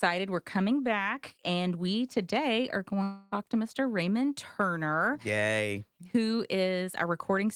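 At 3.03 s the speech breaks off until 3.34 s. The last sound is drawn out into a fading buzz instead of silence. When audio resumes, about 0.28 s is missing. This is likely a long network dropout, concealed by the receiver.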